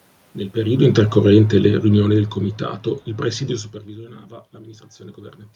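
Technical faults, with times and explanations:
0.56 to 2.84 s, automatic gain falling: The talker shifts position at the microphone around half a second in. The automatic gain control reacts by lowering its gain by about 12 dB over roughly 2.3 s, so the voice and the room noise behind it sink together. On the waveform the envelope tapers steadily across the whole span. On a spectrogram every band, including the noise floor between phrases, darkens evenly, unlike a talker simply moving away.
3.85 to 5.45 s, automatic gain rising: Around 3.5 s the talker moves back, and the level reaching the microphone drops by about 19 dB. The automatic gain control responds by raising its gain by about 4 dB over 1.6 s. That recovers only a small part of the loss, and the voice and room noise swell together. On the waveform the envelope creeps upward gradually rather than stepping. On a spectrogram the background noise floor brightens in step with the speech.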